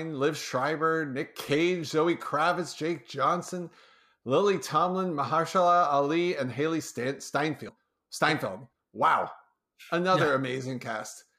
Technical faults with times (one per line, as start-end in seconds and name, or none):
2.25 compressed frames skipped
7.68 compressed frames skipped